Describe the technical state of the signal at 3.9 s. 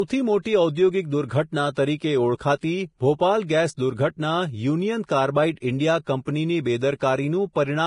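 Vorbis compression is present at 3.9 s, as it is across the whole clip. The speech has nothing above 10.6 kHz, and the remaining treble is hissy and grainy, with fine detail replaced by noise of similar energy. The damage is heavy, with roughened tones and softened consonant onsets. The likely cause is a Vorbis encoder squeezing a smooth spectral floor plus a coarsely quantised residue into a low bitrate, consistent with roughly 30 kbps.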